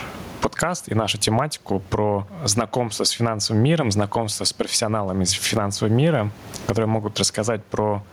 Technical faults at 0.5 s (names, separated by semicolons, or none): gain pumping